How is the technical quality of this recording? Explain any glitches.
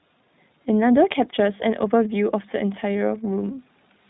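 The recording carries audible codec damage from start to finish. Throughout the clip, the speech passed through the iLBC codec, a narrowband VoIP coder that codes each short frame's excitation on its own. That removes everything above 4 kHz, leaving the speech muffled and telephone-like, with a plainly audible rough, synthetic texture. The character fits 20 ms frames at about 15 kbps.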